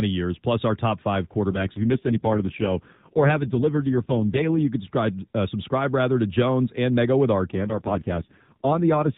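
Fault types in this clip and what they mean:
AMR rate drop: The mobile codec briefly switches to a much lower bitrate and spends the freed bits on error protection. Twice here, the speech turns rougher, buzzier and more synthetic, with no gap and no change in the narrowband 4 kHz ceiling. The first stretch runs from 1.52 to 4.68 s, after "plus our top five" and ending before "can subscribe uh subscribe". The second runs from 7.52 s to the end. The sound fits a drop from 12.2 to 4.75 kbps.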